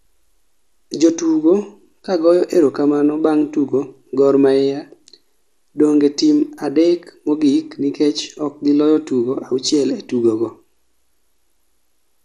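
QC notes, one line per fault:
Throughout: MP2 compression. The speech sounds dull and gurgling, with granular distortion. The likely cause is a low bitrate near 80 kbps, which starves upper sub-bands.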